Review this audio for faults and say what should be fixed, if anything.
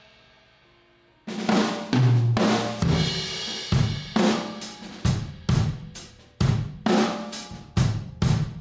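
Throughout the clip the gain swings by around 5 dB, so the audio sounds squashed. This is gain pumping, likely from the input gain being set far too high, so that a fast limiter or compressor clamps down on every peak. The call's microphone processing, which limits the sound to 8 kHz, is not at fault. Lowering the microphone gain so the limiter rarely engages would prevent it.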